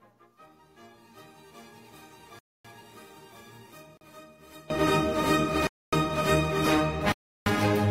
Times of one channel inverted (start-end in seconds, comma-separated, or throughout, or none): 0.00-4.70